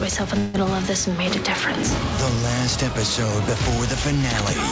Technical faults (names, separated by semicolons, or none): long network dropout